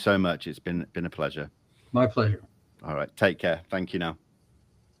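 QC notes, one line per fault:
No faults found in this speech clip.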